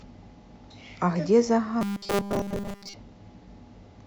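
From 1.81 to 2.94 s the speech collapses into a rigid, metallic buzz at 200 Hz that only loosely tracks the words: robotic sound from repeated short buffers. The likely cause is starved input, with a 5 ms chunk looped in place of most of the real audio.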